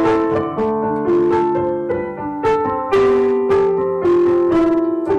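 All the way through, the audio is hard clipping: it's been pushed about 13 dB past what the stage could pass, so the peaks are chopped flat, around a tenth of the samples. Those squared-off tops throw harmonics up high, giving a harsh fuzz on anything loud.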